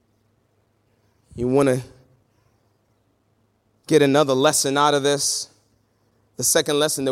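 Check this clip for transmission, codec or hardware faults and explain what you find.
No faults can be heard.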